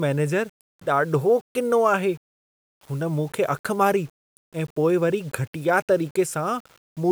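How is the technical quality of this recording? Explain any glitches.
No glitches are audible anywhere in this speech recording.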